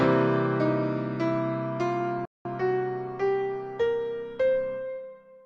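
A playback stall, likely the player running short of data or its thread blocking, cuts the sound to silence for about 0.2 s from 2.25 to 2.45 s, then it resumes.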